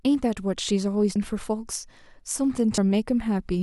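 At 1.15 s and 2.77 s the speech jumps ahead by compressed frames skipped, losing about 0.3 s and 0.1 s (roughly ten and four 26.1 ms frames). Each join is an abrupt jump, visible as an abrupt spectrogram seam.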